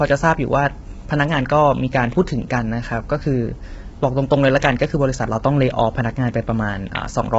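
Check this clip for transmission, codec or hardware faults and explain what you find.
One codec fault runs through the whole speech clip. The roughness most likely comes from low-delay AAC compression such as AAC-ELD at a low rate, around 16 kbps. Its short frames resolve pitch harmonics poorly, so the speech sounds heavily rough and grainy, with noise between harmonics and nothing above 7.8 kHz.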